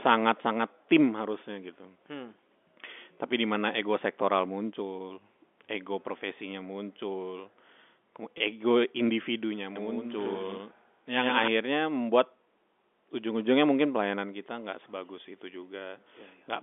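At 8.38 to 8.40 s, just before "ego individunya", there is a brief packet loss with pitch repetition. One packet's worth of sound, 20 ms, went missing, and the receiver filled the hole by repeating the last pitch period. It comes across as a tiny held, buzzy instant rather than a click or dropout. That sustained periodic tone is what separates it from a simple gap of silence or a glitchy splice.

From 9.76 to 11.48 s, after "ego individunya", the sound carries a doubled audio track. A second full-band copy trails the original by roughly a tenth of a second, about 5 dB quieter. It is likely caused by the same signal being captured again over a slower path. It differs from room echo or reverb because the copy has no decay or room colouring. It also begins and ends abruptly, all within the narrow 250 Hz to 3.5 kHz band of the G.711 line.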